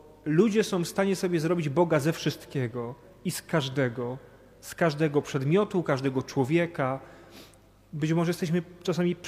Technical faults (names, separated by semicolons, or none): none